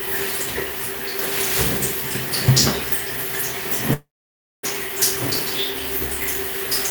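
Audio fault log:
3.93 to 4.65 s, long network dropout: The sound breaks off at 3.93 s. A short buzzy, hissing continuation of the last sound fades out, then nearly 0.6 s of silence follows. The sound returns at 4.65 s, but about 0.7 s of it is gone, so it resumes later than where it stopped. This is likely a stretch of lost packets. The receiver briefly extended the final sound to hide the gap, then had nothing left to play.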